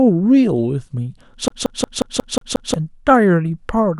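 Speech that catches at 1.48 s and stutters until 2.74 s, a classic CD stuck on one turn: a scratch keeps throwing the laser back a track, so the same 0.18 s slice repeats seven times, each jump marked by a brief mute. On a waveform it appears as identical blocks separated by tiny gaps, and on a spectrogram as a regularly repeating pattern.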